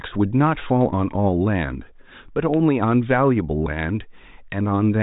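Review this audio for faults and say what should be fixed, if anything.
No faults turn up in this speech audio, so nothing needs to be fixed.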